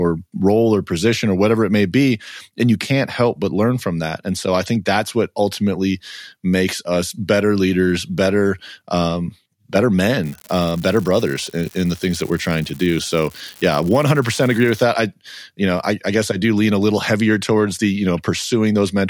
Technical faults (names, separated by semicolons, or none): unreliable data bit